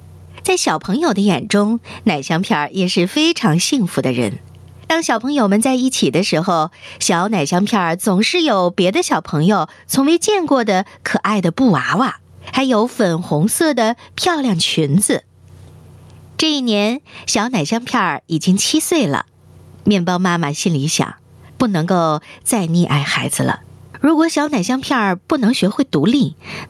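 Throughout the speech the level pumps, dropping on each loud passage and climbing back between them, a swing of around 20 dB. This gain pumping likely comes from input gain set far too high, with a fast limiter or compressor clamping every loud sound.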